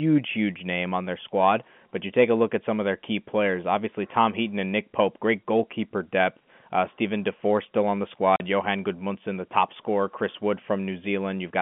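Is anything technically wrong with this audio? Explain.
Yes, there's a dropout in this telephone-band speech. At 8.36 s, right after "still on the", a 40 ms hole opens: packet loss filled with silence. The receiver substituted dead air for missing data, likely two lost 20 ms packets, so the audio cuts abruptly with hard edges.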